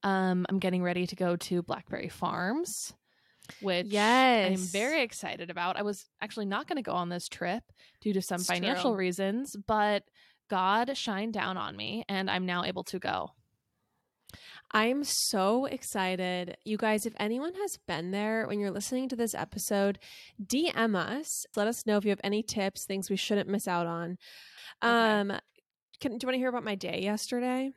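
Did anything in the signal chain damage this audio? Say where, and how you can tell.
No, no signal-chain damage heard.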